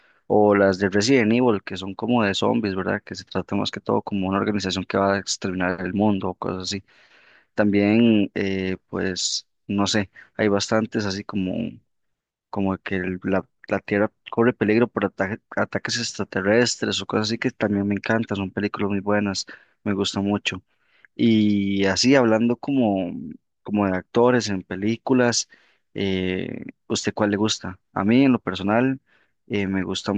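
No technical faults can be heard anywhere in the speech recording. Nothing interrupts or disturbs the audio at any point.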